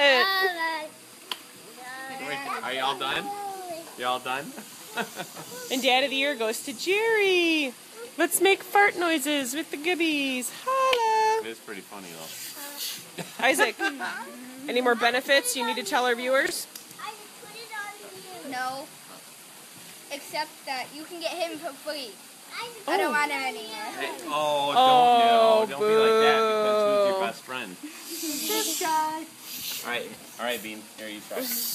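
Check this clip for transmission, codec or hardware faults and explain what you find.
Two brief chunks out of order, at 3.11 to 3.16 s and 16.46 to 16.51 s. At each point a 23.22 ms block of audio plays one chunk late, swapped with the block that should follow it. No sound is lost, but the order breaks. Each swap creates three hard joins, heard as a quick jumbled stutter.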